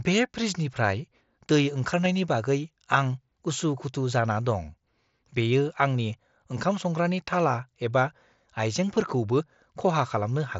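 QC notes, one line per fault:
2.05 s and 8.95 s, concealed Bluetooth headset packet loss: a single voice packet from the headset went missing each time, about 7.5 ms of audio, and the receiver filled the hole by repeating the closest-matching stretch of the waveform just before it. Because each gap is one packet's worth, the patch is nearly invisible over the wideband mSBC path, with no held buzzy tone.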